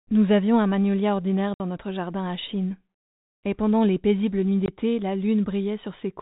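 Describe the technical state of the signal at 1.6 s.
Packet loss filled with silence runs from 1.54 to 1.6 s, just after "avions un magnolia ordinaire": a 60 ms hole, which fits three lost 20 ms packets, where the receiver inserted silence, so the sound cuts out abruptly with hard edges against the band-limited telephone-coded signal.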